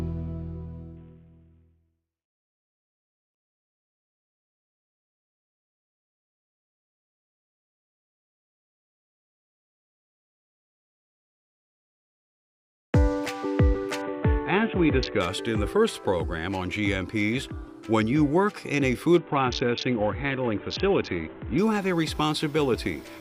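Dull, gritty stretches at 0.97–4.22 s, 14.02–15.21 s and 19.18–21.58 s: a Bluetooth SBC bit pool drop, starving the treble and coarsening quantisation, consistent with roughly 54 kbps.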